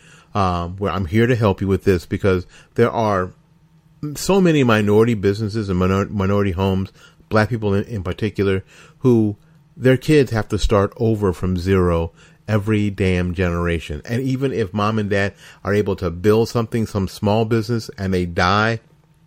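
No dropouts, glitches, distortion or level problems can be heard anywhere in the speech.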